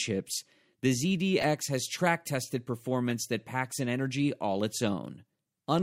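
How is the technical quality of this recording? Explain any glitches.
Three short glitches mar the speech; they are corrupt frames decoded. Damaged bits in compressed frames were played anyway, so misread gains and codes put energy at wrong frequencies. The first, from 1.41 to 1.45 s before "has track tested", spans several frames and is a loud chirpy burst. At 3.10 s, before "that packs an energy", a shorter, moderate blip follows. At 5.05 s, after "an energy all its", a single faint squeak occurs. Unlike a dropout, misplaced energy replaces the sound.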